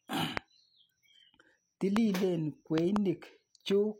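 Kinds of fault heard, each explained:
Loud pop: a sudden voltage step, likely from a plug, switch, static or driver glitch, gives sharp pops about 20 dB above the speech, including one double pop.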